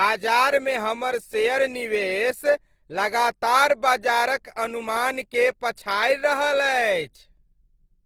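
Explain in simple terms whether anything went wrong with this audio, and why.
Opus compression is audible throughout the speech, from start to finish. The voice sounds rough and grainy, with a noisy fizz where clean tones should be. That texture likely comes from the Opus codec in its music mode, squeezed to a small data budget. To save space it keeps only the rough loudness of each frequency region and fills in the fine detail with copied or noise-like sound. The full range of high frequencies is still present, but the detail within it is smeared.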